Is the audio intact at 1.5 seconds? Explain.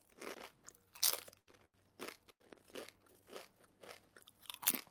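No. Two short stalls from late packets bracket 1.5 s, at 1.39 to 1.49 s and 1.51 to 1.55 s. The jitter buffer ran dry, so the last sound was stretched by about 80 ms and then 18 ms, heard as a brief hold with a slight buzz before playback resumes without loss.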